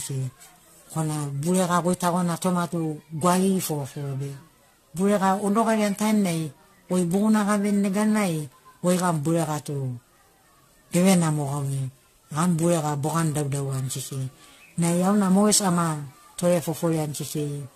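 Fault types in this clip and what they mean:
Generation loss: the speech is swirly, smeared and hollow throughout, with blurred attacks and nothing above 14.1 kHz. That is more damage than one encode explains, likely from around seven re-encodes resembling 64 kbit/s AAC-LC, each requantising on a shifted frame grid.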